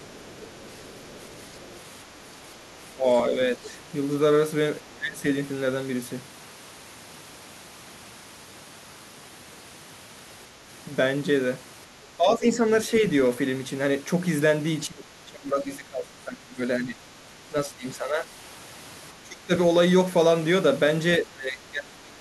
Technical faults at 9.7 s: none

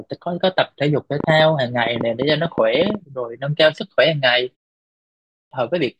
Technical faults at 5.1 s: clipped start after a pause

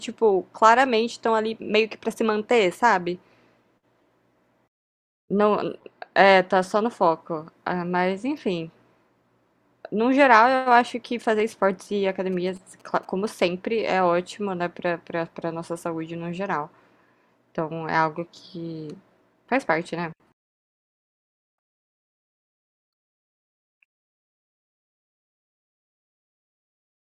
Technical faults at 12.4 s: GSM signalling bursts

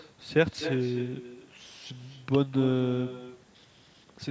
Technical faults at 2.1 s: echo with no canceller

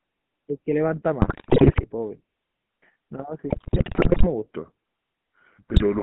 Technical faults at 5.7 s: GSM full-rate codec; section at the wrong speed; GSM bit errors

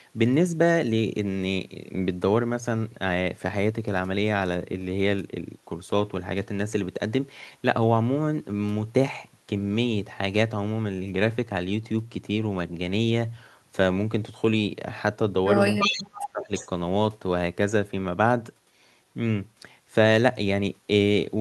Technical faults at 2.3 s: none

